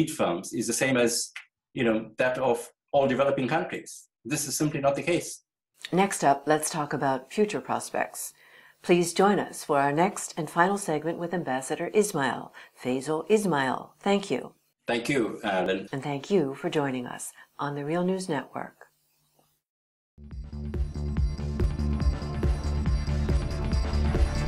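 At 9.69 s, 15.66 s and 21.64 s the sound jumps forward abruptly, each time losing a very short slice of about 20 ms with the two sides butted together and no gap of silence between them. The skips fall almost exactly 6 s apart, and that regular spacing points to audio missing between chunks: the recording chain likely processes 6-second blocks and drops a fragment each time it hands over from one block to the next.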